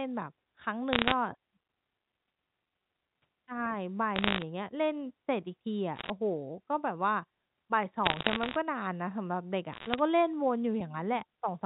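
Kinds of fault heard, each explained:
Bit errors on a digital phone line: flipped bits corrupt single samples, causing crackly ticks in five bursts, visible as lone waveform spikes and thin vertical spectrogram lines.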